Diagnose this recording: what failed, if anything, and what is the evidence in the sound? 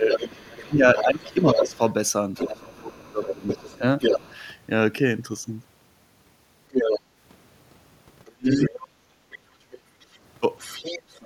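Call processing likely failed during double talk: the echo canceller pulled the talker down with the echo. The speech is suppressed in double talk, dipping about 20 dB over 0.0–1.8 s and 2.6–3.83 s, and about 35 dB at 8.35–8.72 s.

Residual echo, likely from incomplete echo cancellation, lets the other side's voice leak through at about 5 dB below the speech over 0.11–4.35 s and 6.71–7.01 s, then about 15 dB below over 8.25–11.25 s.

The echo canceller's suppressor clamped the microphone while the loudspeaker played, so the background is gated by the echo canceller. Room sound drops about 6 dB for roughly a tenth of a second at 7.03–7.15 s.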